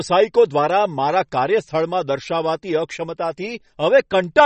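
A short speech recording with plainly audible MP3 compression running the whole way through. Nothing comes through above about 8.3 kHz, so the top end is shaved off flat, and the quieter detail has that watery, swirly quality you get when weak frequency components flicker in and out between frames. S sounds get a metallic edge and attacks feel smeared. That's likely a starved encoder, and the damage fits a low bitrate around 32 kbps.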